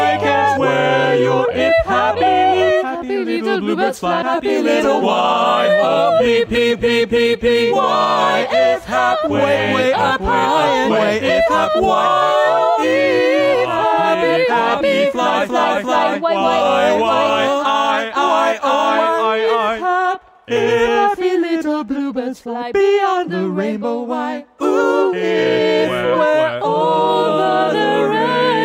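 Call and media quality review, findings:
Imaging from linear upsampling, present for the whole clip. A faint metallic shimmer rides on sibilant and bright high-end content, and the very top of the band sounds dulled. There is a mirrored copy of the spectrum sitting from about 11 kHz up to 22 kHz, roughly 40 dB under the signal. That fits a 22 kHz stream being resampled to 48 kHz with plain straight-line interpolation, which barely filters, so the images leak through. The probable culprit is the resampler stage.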